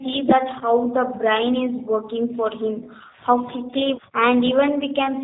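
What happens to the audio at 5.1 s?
At 5.1 s the echo canceller is turning the speech down, most likely because both sides of the call were talking at once. This is speech suppressed in double talk: unable to tell the near talker apart from the far side's echo, the canceller attenuated everything it heard. From 4.51 s to the end of the clip, roughly 0.7 s in all, the speech dips and breaks up, sinking at its deepest by something like 40 dB, close to silence.

The G.729 codec affects this moment as it does the whole clip. At 8 kbit/s it does not carry the waveform itself. It sends a vocal tract filter, a pitch predictor and a few pulses for each 10 ms frame, and the decoder rebuilds speech from those. Everything above 4 kHz is gone. What remains sounds noticeably rough and synthetic, so the fragments that survive the suppression also carry that coarse, buzzy quality.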